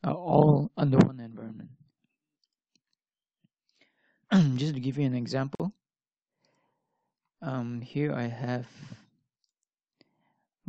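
At 5.55 s the sound drops out for about 47 ms, ending at 5.60 s. This is a gap at a join of encoded pieces. Separately encoded sections were joined untrimmed, leaving encoder delay and end padding as silence. The edges are smeared by the codec, and the sound resumes where it stopped.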